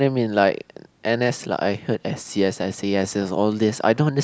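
Nothing stood out as a technical problem on listening to this recording.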